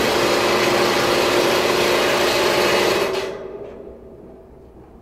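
No technical faults occur at any point in this audio, so there is nothing to describe.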